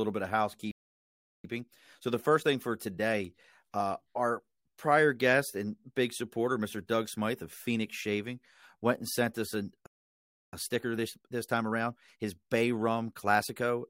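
The speech cuts to silence just after "bit of" at 0.71 s and resumes at 1.44 s, a playback stall of about 0.73 s, likely the player running dry or being blocked. From 1.44 to 4.44 s, up to "prior guest and big", the speech is hurried at 1.1 times normal speed with its pitch unchanged. This is time-compressed catch-up: the player trims tiny slices and cross-fades them to clear its backlog. After "and sent us a", a second stall silences the audio from 9.86 to 10.53 s, about 0.66 s, likely from the same cause. Catch-up follows from 10.53 to 13.53 s at 1.15 times speed, sounding more rushed than the first.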